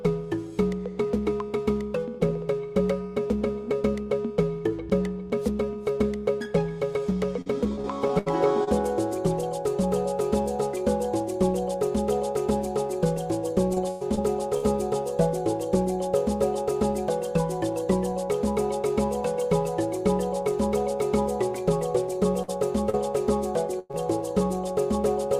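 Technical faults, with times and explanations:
7.41 to 8.69 s: repeated packet loss (robotic sound). Six gaps, the longest 72 ms, together about 200 ms of missing audio. Each was bridged by extending the preceding sound before the next dropout arrived, so roughly 15% of the stretch is synthetic fill, giving a choppy texture with pieces missing.
13.75 to 14.65 s: repeated packet loss (robotic sound). Four gaps, the longest 105 ms, again around 200 ms lost in total. Because the span is shorter, about 22% of this span is concealment.
22.43 s: burst of packet loss. About 60 ms went missing at once and was covered by a 50 ms continuation of the last sound that fades as it goes. It is heard as a brief held buzz or hiss, after which the audio picks up further along.
22.90 s: short concealed packet loss. Roughly 40 ms never arrived in time, and 34 ms of predicted audio was blended back into the real signal. 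The result is a quick smear or wobble, and a short sound at that point can disappear.
23.79 to 23.91 s: burst of packet loss. About 100 ms was lost in a row and filled with a decaying extension of the previous sound, with no silent stretch. It comes across as a held tone or fading noise, followed by a jump forward past the missing audio.
23.91 s: short concealed packet loss. Directly after that burst, about 20 ms more was lost and patched before the decoder rejoined the real audio. This lengthens the smeared stretch slightly and can sound like a small wobble at the point of recovery.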